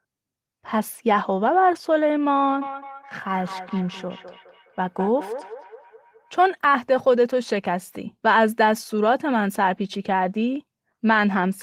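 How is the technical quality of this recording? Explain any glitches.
The recording has one clear fault: a feedback echo between two devices from 2.62 to 6.42 s. A second device in the room replays the call, and this microphone recaptures it, where its own echo canceller cannot remove it. Speech returns roughly every 200 ms, thin and ringing, peaking about 14 dB below the direct speech.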